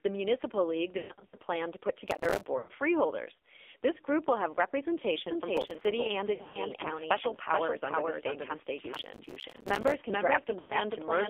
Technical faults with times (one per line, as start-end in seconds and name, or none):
0.00-11.30 AMR narrowband mobile codec
0.98-1.40 lost AMR speech frames
2.08-2.46 processor overload crackle
2.58-2.71 lost AMR speech frames
5.57-5.85 processor overload crackle
6.34-6.59 lost AMR speech frames
8.94-9.94 processor overload crackle
10.60-10.74 lost AMR speech frames